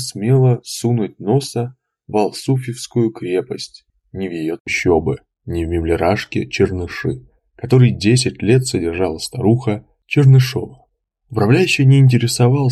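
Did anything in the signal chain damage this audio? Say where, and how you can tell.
No, none of the stages from capture to playback has left any audible damage on this audio. Listening closely across the whole clip, nothing points to a problem anywhere in the chain.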